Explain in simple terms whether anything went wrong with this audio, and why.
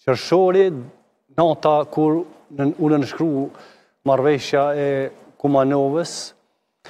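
There's one sharp click at about 5.03 s, likely from dropped samples: a couple of samples went missing, so the waveform jumps abruptly.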